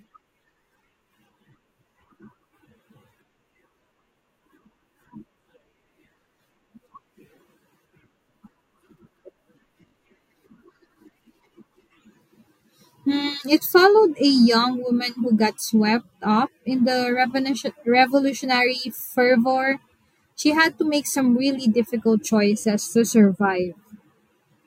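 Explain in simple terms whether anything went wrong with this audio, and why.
Three quick stutters from a repeated buffer, at 4.26–4.28 s, 9.88–9.92 s and 22.62–22.64 s (after "make some really difficult"): fresh speech arrived late, so 20 ms snippets replayed.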